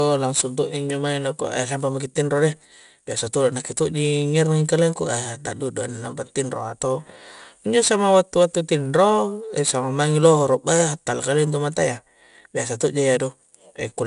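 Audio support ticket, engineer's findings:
4-bit ADPCM compression throughout the speech: gritty level-tracking hiss on loud passages, nothing above 10.6 kHz, fitting a 22 kHz sample rate near 89 kbps; coarse adaptive quantiser steps.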